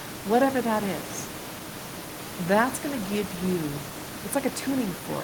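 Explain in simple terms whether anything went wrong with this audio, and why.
Nothing went wrong with this speech recording. The noise underneath is just background noise from the room where the microphone was, sitting well below the talking and part of the recording itself.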